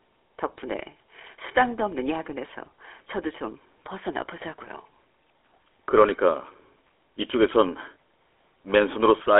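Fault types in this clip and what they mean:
GSM full-rate codec: the speech passes through an early mobile-phone coder that models the vocal tract and excites it with a coarse, regularly spaced pulse train, leaving a plainly audible buzzy, gravelly roughness throughout. The band runs roughly 300 Hz to 3.4 kHz with nothing above 3.8 kHz, consistent with a 13 kbps link. Simple telephone band-limiting would sound muffled but clean, while this grainy texture marks the coder itself.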